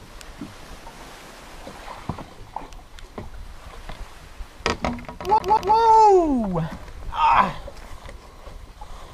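At 5.38 to 5.76 s the audio has a CD stuck on one turn: a 190 ms fragment replays twice, with identical waveform blocks separated by brief muted gaps.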